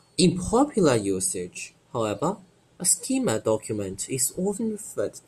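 Nothing in the speech stood out as a technical problem on listening.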